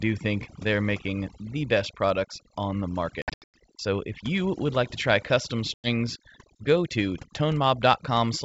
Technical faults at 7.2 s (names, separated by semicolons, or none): overdone noise removal